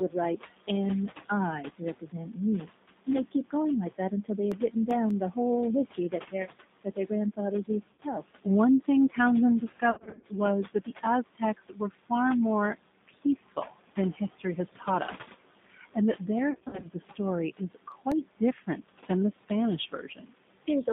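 Speech carried over a G.729 codec line, with nothing below 150 Hz or above 3.7 kHz, giving a flat-topped spectrogram and a plainly rough, synthetic texture. Noise suppressor artifacts run throughout: the room noise, about 15 dB below the speech, drops by about 16 dB between phrases. Speech cut by the noise suppressor swallows soft consonants and word endings from 0.09 to 5.36 s, 5.93 to 12.11 s and 12.75 to 20.68 s, with drops of up to about 19 dB visible as missing low-energy bands in the spectrogram. CD scratch ticks, the longest about a millisecond long, appear as thin vertical spikes in the waveform: five between 4.32 and 5.11 s and six between 17.53 and 18.51 s. VoIP packet loss concealed by the speech codec appears at 7.93 to 8.00 s, at 9.91 to 10.25 s and at 16.51 to 16.89 s. Those losses produce buzzy, smeared harmonics that fade and leave weak, distorted speech afterwards, and the longer two are made up of scattered losses in runs of up to 60 ms.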